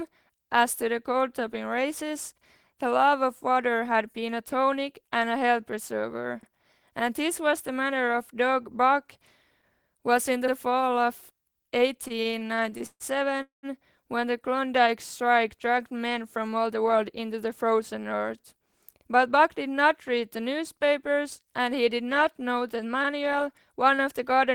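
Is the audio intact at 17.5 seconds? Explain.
No. From 16.56 to 18.24 s a jitter buffer speed-up is under way: the receiver's buffer had overfilled, so it trimmed short pitch-period slices, about 150 ms in all. The speech runs roughly 7% fast at unchanged pitch, sounding hurried.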